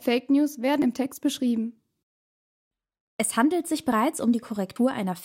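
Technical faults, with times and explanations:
0.82 s, 3.92 s and 4.76 s: likely dropped buffers (overrun). At each point the speech jumps forward with no gap of silence, as if a short stretch, somewhere around 40 ms, has been cut out and the two sides butted together. That fits the capture side failing to read a block of samples before the hardware overwrote it. The waveform discontinuity at the splice causes any click, and the missing block causes the skip.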